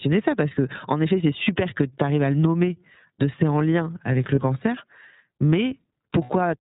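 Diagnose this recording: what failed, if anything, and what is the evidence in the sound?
The codec stage shaped the whole clip. This speech is band-limited with nothing above 4 kHz and has a plainly rough, slightly synthetic texture. That fits the iLBC codec in its 13.33 kbps, 30 ms frame mode, which codes each frame's excitation independently.

The network stage dropped packets, causing lost iLBC frames. At 1.44–1.47 s, between "que en effet c'est" and "que tu arrives à", and at 4.35–4.38 s after "c'est en lien avec", a 30 ms stretch becomes a held, buzzy vowel. At 6.24–6.30 s the hold lasts 60 ms, which points to two consecutive frames lost. In each gap the decoder repeats the last pitch cycle mixed with noise, and the speech recovers immediately afterwards because the frames stand alone.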